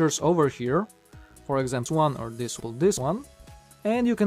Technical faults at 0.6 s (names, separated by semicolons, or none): mains buzz